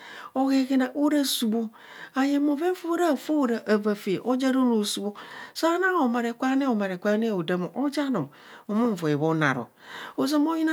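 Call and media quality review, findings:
No call or media quality findings to report for this speech clip.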